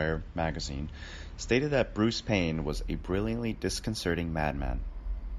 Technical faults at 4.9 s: imaging from linear upsampling

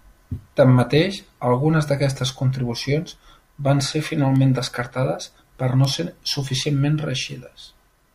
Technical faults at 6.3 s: word clock ticks

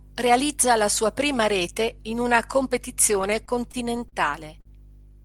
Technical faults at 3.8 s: repeated stalls (stutter)

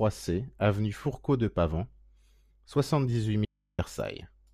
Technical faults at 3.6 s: audio dropout to a faint residue

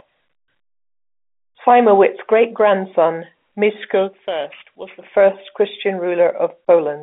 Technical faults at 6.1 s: none

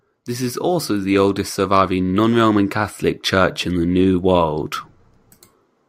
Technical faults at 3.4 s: automatic gain rising

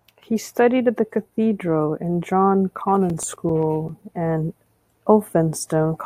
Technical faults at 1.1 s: none

